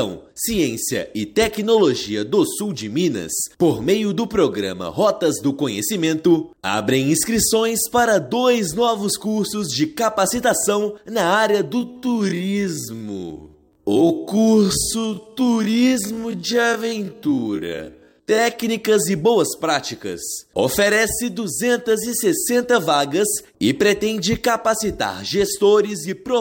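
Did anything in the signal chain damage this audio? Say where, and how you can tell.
Yes. From 11.77 to 18.45 s the audio suddenly runs at half speed while its pitch holds steady. It drags, then snaps back to normal pace. This time-stretched section was likely made by software stretching audio by repeating short pieces.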